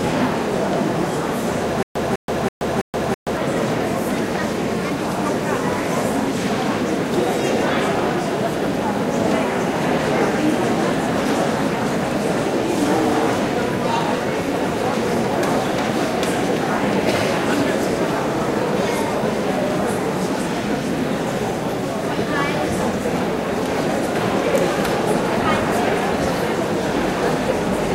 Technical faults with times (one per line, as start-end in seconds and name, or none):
1.83-3.37 stutter with silent gaps